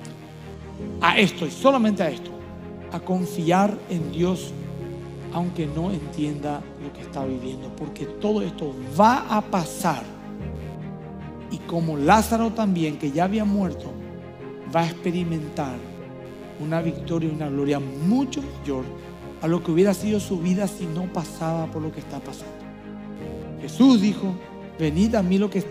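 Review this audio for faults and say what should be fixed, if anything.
Computer activity noise runs through the whole clip: a buzzing, chirping layer pulsing at around 100 Hz, sitting roughly 35 dB below the sound. It rises and falls with the computer's workload rather than with the audio. Changing load on the processor, graphics card or peripherals pulls current through the ground the audio circuit shares, and that shifting ground reference ends up in the signal path. To prevent it, use a USB isolator or an external interface with its own supply, and keep audio grounding separate from the computer chassis.

Adaptive stream at a lower bitrate affects 4.93 to 8.93 s. Quality drops abruptly at the start of that span, without any gap. Nothing remains above 12.4 kHz, and codec artefacts become more prominent. At 8.93 s the fuller treble returns just as suddenly. This sounds like the player switched to a lower-bitrate rendition because the connection slowed, which fits a step down from about 96 to 48 kbit/s AAC. 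To prevent it, capture from a local file or fixed-bitrate source, or lock the stream to its highest rendition.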